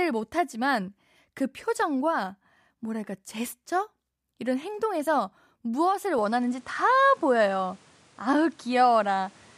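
Input switched to a poorer device at 6.18 s in this speech recording: from there the band stops near 11.4 kHz, level shifts around 5 dB, and fresh background noise appears, likely from a microphone change.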